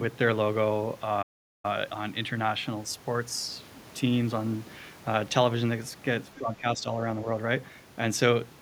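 At 1.22 s the speech stops dead and stays silent until 1.65 s, a gap of about 0.41 s, before carrying on. This is a playback stall: the output had nothing to play for that stretch, likely because the player's buffer ran dry or its audio thread was held up, and it resumed once data was flowing again. The break lands mid-phrase, so it sounds abrupt.

From 6.38 s to 6.86 s the speech is pulled down in level, dipping by roughly 10 dB at its deepest, with the effect spread over about 0.4 s of that window. This is speech suppressed in double talk, likely from an echo canceller that could not tell the near talker apart from loudspeaker echo while both sides were active, and so attenuated the whole signal rather than only the echo.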